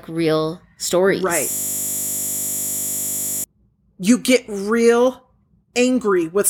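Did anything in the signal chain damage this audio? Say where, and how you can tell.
Yes, at the driver or buffer stage. Right after "real stories", at 1.51 s, the speech collapses into a steady 50 Hz buzz that runs until 3.44 s, when it picks up again on "you get". That's a system hang loop: the host stalled while the audio hardware kept replaying the same 20 ms stretch of its ring buffer, about 96 times over. A buffer that short loops fast enough to sound like a tone rather than a stutter.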